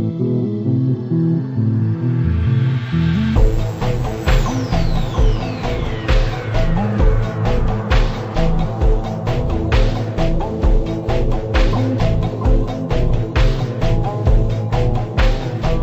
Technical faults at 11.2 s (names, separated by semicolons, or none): stereo read as mono